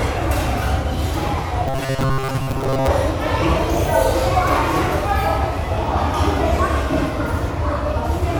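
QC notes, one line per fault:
1.68–2.90 s, robotic sound from repeated short buffers: the sound collapses into a rigid metallic buzz near 134 Hz, likely because late audio was filled by looping a roughly 7.5 ms stretch, replacing most of the real signal and imposing that fixed pitch.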